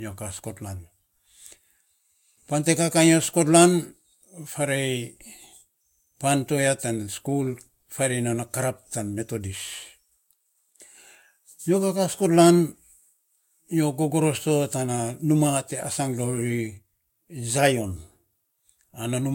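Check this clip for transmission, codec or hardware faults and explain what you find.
One fault runs through the whole speech clip: low-bitrate audio saved at a high bitrate. The file is an MP3 at a generous rate, yet nothing is present above 16.6 kHz, and the speech carries the smeared texture of lossy compression. That combination likely comes from an earlier low-rate encode, consistent with roughly 60 kbit/s Vorbis, that was later re-saved at a higher rate. Re-encoding cannot restore detail the first codec discarded. The second MP3 pass adds almost nothing of its own. A plain low-pass filter would remove the top band cleanly, without that codec texture.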